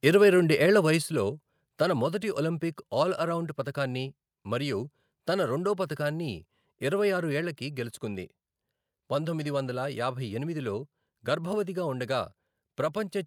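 A speech recording with microphone overload from 0.06 to 0.24 s, just before "రెండు ఏళ్ల": peaks exceed the converter's limit by about 1 dB, leaving a small fraction of samples flat-topped in the waveform with a crackly edge, likely from input gain set too high. The microphone volume is stepped down at 1.02 s, right after "రెండు ఏళ్ల", by about 5 dB, and again at 7.41 s, after "రెండో పతకాన్ని ఇరవై ఆరు", by about 2 dB. Each appears as a sudden drop in waveform envelope and spectrogram brightness, likely from call software automatically lowering input gain.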